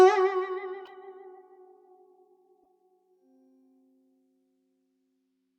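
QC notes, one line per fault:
0.85–0.91 s and 2.64–2.66 s, corrupt frame decoded: in the music, a brief chirp-like burst of stray noise sits on top at 0.85 s, peaking around -35 dBFS, and a fainter blip follows at 2.64 s, only about -55 dBFS. Each sounds like a couple of damaged compressed frames played regardless: flipped bits gave the decoder wrong gains or misread codes, so energy landed at wrong frequencies for roughly the span of those frames.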